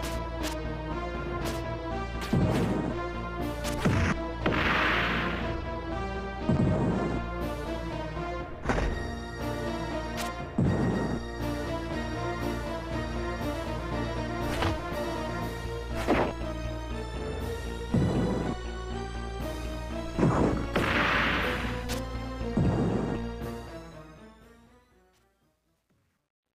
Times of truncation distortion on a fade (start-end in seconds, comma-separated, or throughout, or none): 23.30-26.59